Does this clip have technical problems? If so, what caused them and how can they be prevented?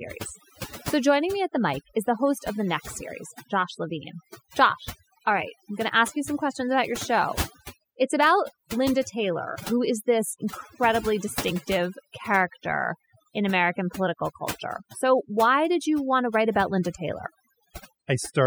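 Yes. Overdone noise removal runs throughout this speech clip. The reducer was pushed too hard. It cuts individual frequency bands whenever they sit close to its noise estimate. Quiet parts of the voice vanish too. The background drops and breaks up into twinkling specks. Prevent it by applying gentler reduction and checking the result by ear.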